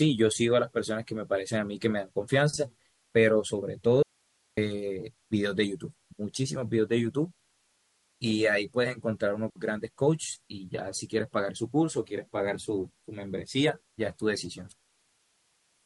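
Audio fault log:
4.03–4.57 s, audio dropout to a faint residue: the signal feeding this path was likely lost for about 0.55 s while everything downstream stayed live, so the speech cuts out abruptly rather than pausing or fading, and the gap holds only hiss sitting around 40 dB below the normal speech level. When the signal returns at 4.57 s it comes back just as suddenly, mid-flow, leaving a hard-edged hole of open-channel noise.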